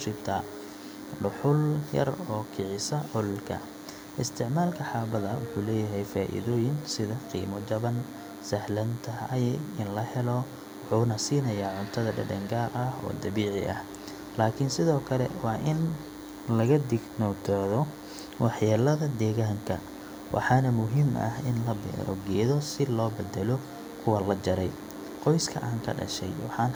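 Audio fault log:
throughout, DECT cordless phone buzz: a steady, thin, raspy buzz sits under the speech for the whole clip. It stays well below the voice, roughly 20 dB down. Its fundamental is at 100 Hz with a dense stack of harmonics above it. A nearby DECT handset or base station sends a radio burst every 10 ms, and the audio circuitry rectifies each burst into a click-like pulse, producing this constant buzz.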